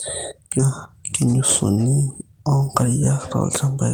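At about 0.59 to 0.67 s there is a skip ahead: roughly 0.7 s of speech was dropped while later audio was already queued, so playback lurches forward and the two sides are butted together with only a 7 ms join. No silence marks it, unlike a dropout; the speech simply jumps.

From 1.26 to 1.77 s comes a jitter buffer speed-up. The receiver held too much audio and trimmed short pitch-period pieces repeatedly, removing about 40 ms and running the speech at 107% speed. It sounds briefly hurried, but the pitch stays put, unlike resampling, which would raise it.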